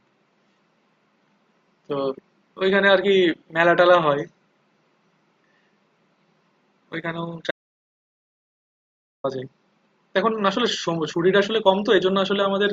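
An audio dropout to silence hits this speech recording from 7.51 to 9.24 s: the sound cuts off mid-flow into dead digital silence, with no room tone, then resumes abruptly. About 1.73 s of speech is simply gone, most likely because the input signal was lost while the recorder kept writing zeros.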